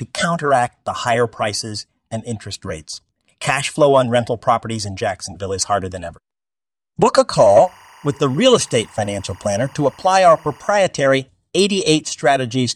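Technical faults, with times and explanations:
7.31–10.83 s, timecode bleed: a faint chirping warble roughly 30 dB under the speech from leaked linear timecode, showing as thin spectrogram bands near 1 and 2 kHz.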